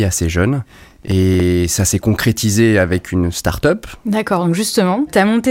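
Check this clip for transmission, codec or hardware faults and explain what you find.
A gritty, tearing crackle rides on the speech from 0.58 to 1.40 s, then stops. This is processor overload crackle: the processor missed a run of buffer deadlines, around a dozen or more in quick succession, each a few milliseconds long, and each miss replayed a sliver of old audio with hard edges.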